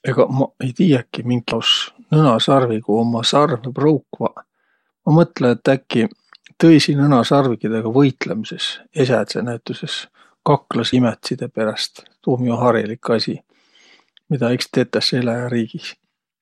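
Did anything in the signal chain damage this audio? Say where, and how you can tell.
Yes. Compressed frames were skipped at 1.51 s and again at 10.92 s, a fault at the codec or storage stage. At each point the speech jumps forward by about a tenth of a second, a handful of whole 21.3 ms frames that were either missing from the file or rejected by the decoder as damaged.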